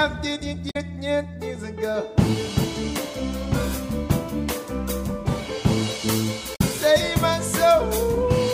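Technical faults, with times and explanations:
0.67–0.76 s and 6.52–6.62 s: damaged data in a compressed stream. Each disruption lasts about a tenth of a second. Corrupted bytes made the decoder misread or reject frames and lose sync. It then hunted for the next valid frame header, briefly breaking the sound.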